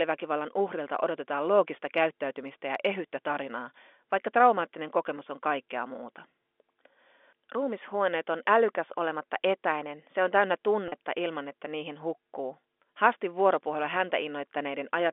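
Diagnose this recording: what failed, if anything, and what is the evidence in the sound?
The network dropped a short run of packets, and you can hear the receiver patching the hole with packet loss with pitch repetition. At 10.88 s, right after "etäinen se on täynnä" and just before "ilman että niihin hukkuu", there's a gap of about 40 ms, which fits two lost 20 ms packets. It's too short to fade out, so the concealment just loops the last pitch period and you get a brief, slightly buzzy held sound. The G.711 telephone coding, with its 250 Hz to 3.5 kHz line band, is just the path it travelled over.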